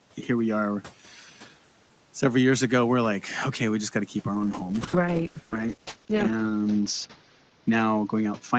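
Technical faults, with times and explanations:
1.07–1.3 s, speech cut by the noise suppressor: right after "here we are", the suppressor took roughly a fifth of a second of speech for background and pulled it down about 7 dB, so that bit sounds swallowed and faint against the room noise.
4.35 s to the end, call bitrate drop: after "got to keep our", the bandwidth estimate fell and Opus went from 32 kbps down to 8 kbps, sitting at its lowest for about 2 s. Coding gets much coarser there, so it sounds rough, watery and duller.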